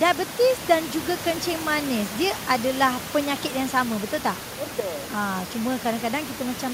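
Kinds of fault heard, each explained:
No system faults are audible; the only thing under the speech is the room's own background noise, about 14 dB below it, which was captured as part of the recording.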